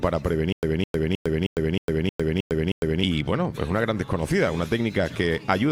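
From 0.52 s to 3.03 s the sound catches and repeats: a short burst of about 208 ms plays, drops into roughly 105 ms of dead digital silence, then returns unchanged, eight times at an even 313 ms pace. This stutter with silent gaps likely comes from a stalled player or stream replaying its last fragment on each retry before running empty, so the audio meant for that stretch never arrives.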